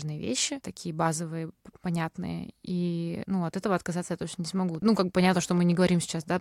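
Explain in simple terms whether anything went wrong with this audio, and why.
A train of clicks, about fifteen irregular pops at roughly 11 per second, runs from 4.69 to 5.87 s after "отказаться я точно не", likely from electrical interference or a faulty connection or power supply.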